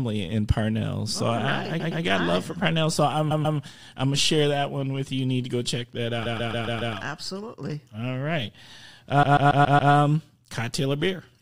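Speech, with repeated frames stuttering at four points: 1.79–2.02 s before "got right love for", 3.30–3.58 s before "I'm gonna share that", 6.25–6.95 s after "to go check that", and 9.22–9.92 s. Each time, a block of about 116 to 139 ms, which fits a run of five or six compressed frames, plays again two or five extra times, lengthening the audio. A spectrogram shows identical slices stacked side by side, with a vertical seam at each mismatched join.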